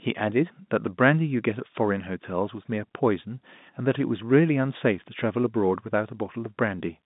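No technical faults found.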